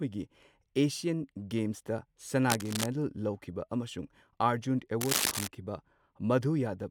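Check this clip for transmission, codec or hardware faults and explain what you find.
Two bursts of cable scratch noise, at 2.50 to 2.86 s and 5.01 to 5.48 s, are the only faults. The likely cause is a worn cable or connector shifting, so its contact resistance fluctuates rapidly. The result is rough scratching over the speech, about 5 dB below it at first and then roughly as loud.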